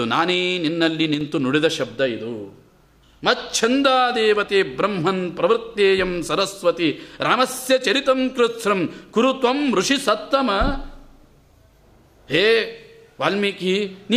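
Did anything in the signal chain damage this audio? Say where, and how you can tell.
Yes. From 1.14 to 1.21 s the level falls abruptly by about 6 dB and then returns, which sounds like one channel dropping out. The likely cause is an intermittent analogue connection on one leg of the stereo pair before the mono sum. A full dropout would go silent, but this is a sharp half-level step.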